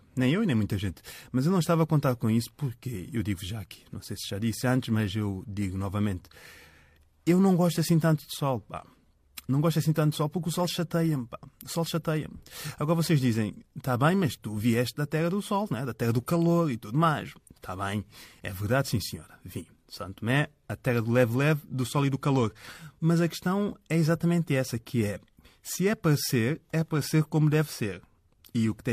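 No faults are audible anywhere in the recording.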